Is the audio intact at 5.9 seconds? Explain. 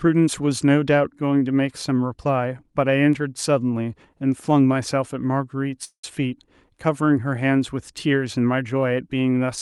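No. A call audio freeze runs from 5.84 to 6.04 s: packets were likely held up, so the jitter buffer ran empty. The last sound is stretched into a fading buzz that ends in silence, then the audio resumes where it stopped, about 190 ms late.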